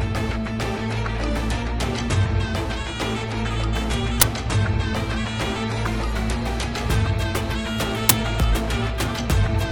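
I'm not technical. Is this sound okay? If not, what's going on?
No. There's an uninitialised buffer fault at 4.21 s and again at 8.09 s, each a very short, loud crack lasting about 12 ms, which fits a 512-sample buffer. Playback moved on to a chunk of memory before any audio had been written into it, so whatever random leftover data sat there was played out as sound.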